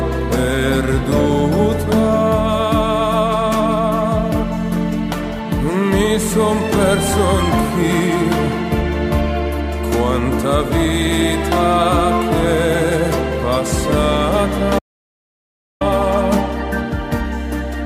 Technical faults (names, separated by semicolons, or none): audio dropout to silence